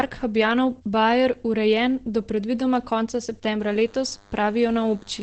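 Opus compression affects the whole clip. The speech sounds muffled and hoarse, with a heavy loss of detail and nothing above about 8.7 kHz. That is the sound of Opus working in its SILK speech mode at wideband bandwidth, likely at a low bitrate near 12 kbps. At that rate the encoder models the voice rather than keeping its fine spectral texture, so it discards the upper band and leaves a thick, rasping quality.

DECT cordless phone buzz starts at 3.59 s and runs to the end. A nearby DECT handset or base transmits a radio burst every 10 ms, and the audio circuitry rectifies it into sound. The result is a steady, thin buzz at 100 Hz, rich in harmonics, sitting roughly 30 dB below the speech. It is faint.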